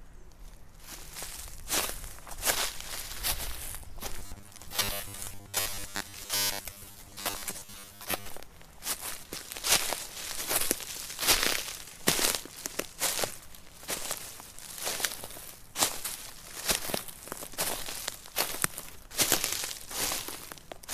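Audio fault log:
4.19–8.29 s, robotic sound from repeated short buffers: the audio turns into a rigid metallic buzz pitched at 100 Hz. The likely cause is a 10 ms stretch being replayed over and over, filling most of that span, while fresh audio is skipped.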